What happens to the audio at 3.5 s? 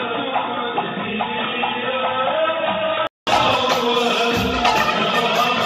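Compressed frames skipped at 3.53 s: one whole block of the encoded audio never reaches the output, because it was either missing from the stream or rejected by the decoder as corrupt. The sound jumps forward by about 20 ms, which points to a single lost frame of 23.2 ms. In a lossy codec adjacent frames overlap, so the seam is a quick smeared blip; in a lossless one it is a hard click, with a tiny piece of the sound dropped from the timeline.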